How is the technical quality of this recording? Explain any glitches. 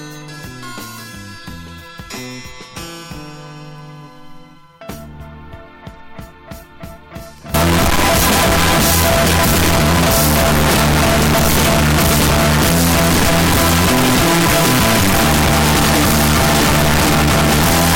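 The recording breaks down badly partway through. From 7.54 s to the end, a float read as integer fault turns the audio into near-square, very loud, harsh sound, likely from 32-bit float samples being interpreted as 32-bit integers.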